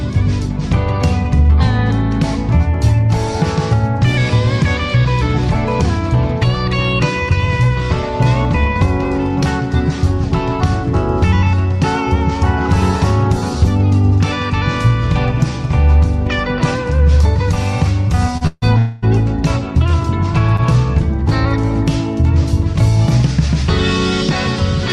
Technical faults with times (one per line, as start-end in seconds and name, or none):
18.37-18.43 short stall from a late packet
18.47-19.04 call audio freeze
20.56-20.60 short stall from a late packet